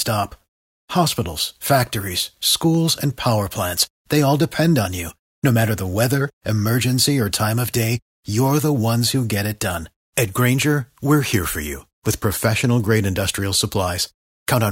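At 2.75 s, just before "and power", a single sharp click cuts through the speech, likely from dropped samples. A fraction of a millisecond is missing, so the waveform jumps straight to a later value. That discontinuity shows as a thin vertical line spanning the spectrum.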